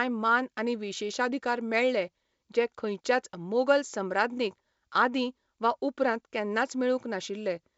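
No technical faults are audible.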